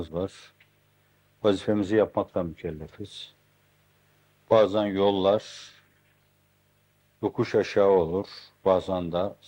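No technical faults are audible.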